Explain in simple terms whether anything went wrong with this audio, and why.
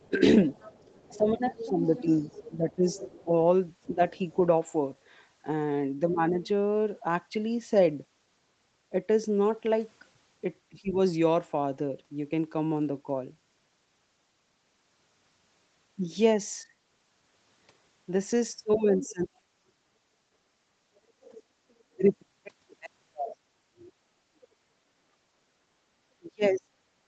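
From the start to 6.47 s and again from 18.72 to 23.92 s, a faint second voice sits behind the speech. That is the other side's voice leaking through, likely from a loudspeaker echo the call's echo canceller didn't fully remove.

During the same stretches, 0.09 to 6.36 s and 18.75 s to the end, plus briefly at 10.7 to 10.95 s, the main speech dips and thins. This is speech suppressed in double talk, likely because the canceller turned everything down while both sides talked at once.

From 19.74 to 19.87 s the room sound briefly drops away and comes back. That is background gated by the echo canceller, which clamped the microphone while the loudspeaker played.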